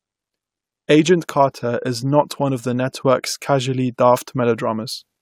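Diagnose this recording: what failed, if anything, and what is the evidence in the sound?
Nothing failed in this speech recording, and no stage from capture through to playback leaves an audible fault. There is no event in the sound to time or trace to a mechanism, so there is nothing to diagnose.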